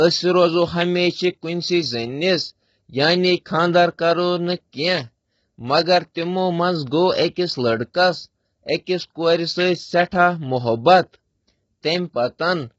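Low-delay AAC compression runs throughout the speech, likely from AAC-ELD at a low bitrate near 16 kbps. Its short frames resolve pitch harmonics poorly, so the voice sounds heavily rough and grainy, with noise filling between harmonics and nothing above 7.7 kHz.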